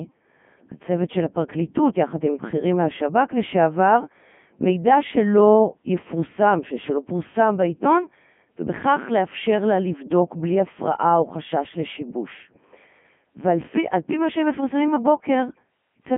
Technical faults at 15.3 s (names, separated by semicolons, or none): Codec 2 vocoder